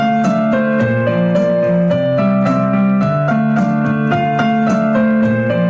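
No technical faults can be heard anywhere in the clip.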